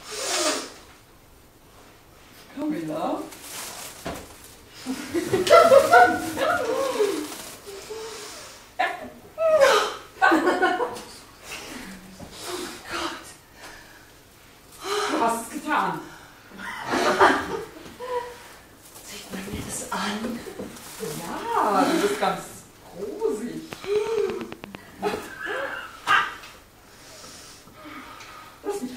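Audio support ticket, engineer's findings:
Train of clicks, 23.73–24.76 s: regular ticking at about 8.8 per second, around ten pulses, peaking about 15 dB above the signal. Likely external interference or a struggling interface injecting repeated pulses.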